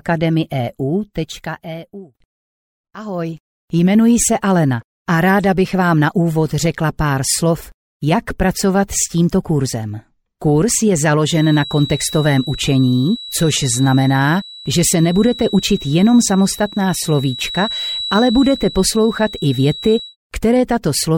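A feedback whistle sits under the audio from 11.26 s to 20.17 s. It is a thin, steady tone at 3.9 kHz. It stays roughly 15 dB below the main sound and swells and fades slowly in level. It never runs away. The likely cause is a loudspeaker feeding back into a microphone, with the loop gain resting just at the edge of feedback. That lets this single high frequency ring on and on.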